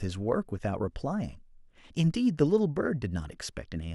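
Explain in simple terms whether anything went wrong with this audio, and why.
Nothing went wrong with this audio on the technical side. Listening all the way through the speech, there is no moment where the sound breaks, jumps or shifts in a way it shouldn't.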